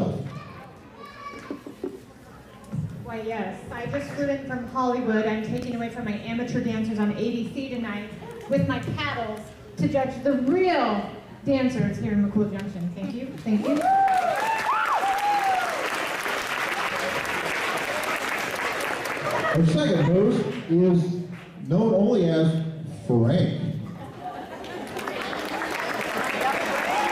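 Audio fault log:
5.62 to 5.74 s, loud pop: two sharp pops arrive in quick succession, peaking about 5 dB above the surrounding sound, which continues unbroken underneath them. The double strike within roughly a tenth of a second suggests a single electrical disturbance, likely a brief voltage step or pulse from a connector, switch, static discharge or driver glitch, which the downstream circuitry shaped into a pulse.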